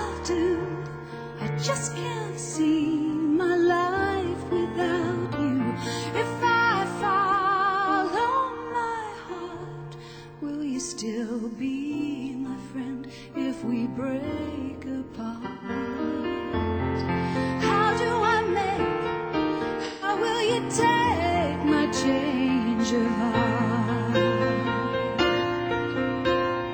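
At 15.45 s and again at 19.85 s, about 0.17 s of AAC frame loss with concealment: missing frames are rebuilt from prior spectrum, leaving brief smeared, noisy patches.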